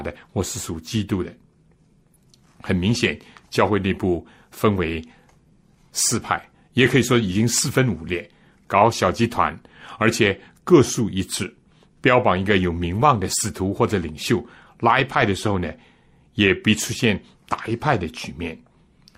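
No technical faults are audible anywhere in the speech recording.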